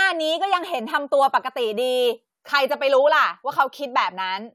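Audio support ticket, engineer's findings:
Listened through the speech recording and found nothing wrong on the audio side, so there's no fault to log for this ticket.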